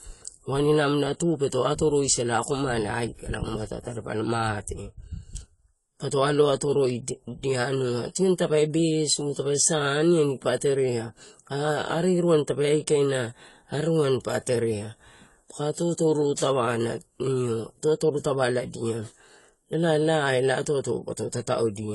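Throughout the speech the sound is dull and smeared, with a warbling, fizzy texture clinging to sibilants and held vowels, and nothing at all above 11.5 kHz. That hard ceiling and the plainly audible spectral damage are the signature of AAC compression, likely AAC-LC at a low bitrate, which fits about 32 kbps. Starved of bits, the encoder pulled its cut-off down and quantised the remaining bands so coarsely that holes and substitute noise replaced real detail.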